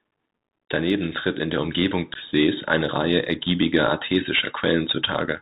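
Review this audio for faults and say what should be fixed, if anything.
The whole speech clip runs through the Bluetooth CVSD headset codec, which tracks the waveform one up-or-down bit at a time. That's why everything is capped at 4 kHz, s sounds come out scratchy, and there's a grainy hiss underneath. To prevent it, make sure the headset negotiates wideband (mSBC) or better instead of falling back to CVSD.

At 2.14 s there's unconcealed Bluetooth headset packet loss. About 15 ms vanishes abruptly, a few packets' worth, leaving a hole, and the speech resumes quieter for a moment. To prevent it, reduce radio interference or distance, or use a link with packet loss concealment.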